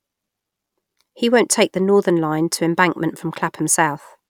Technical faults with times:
none

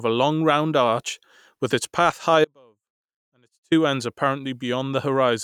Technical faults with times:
2.45-3.72 audio dropout to a faint residue

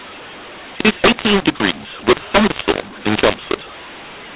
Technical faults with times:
0.00-4.35 mu-law and A-law mixed up

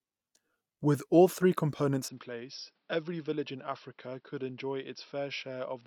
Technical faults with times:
2.08-5.87 input switched to a poorer device

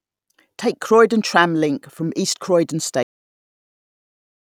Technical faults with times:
3.03-4.52 cut-off end

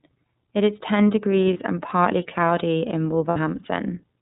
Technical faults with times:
0.00-4.22 iLBC codec
1.53-1.57 lost iLBC frames
3.30-3.37 lost iLBC frames

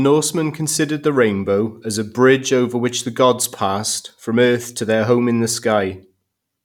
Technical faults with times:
none

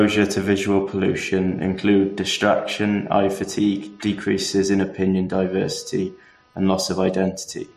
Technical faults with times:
0.00-7.76 computer activity noise

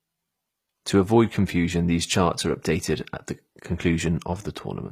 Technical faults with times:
0.00-4.92 HE-AAC compression

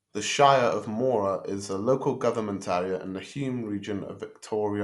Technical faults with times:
0.00-4.84 Dolby Digital compression

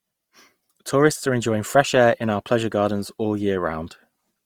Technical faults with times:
0.00-4.46 Opus compression

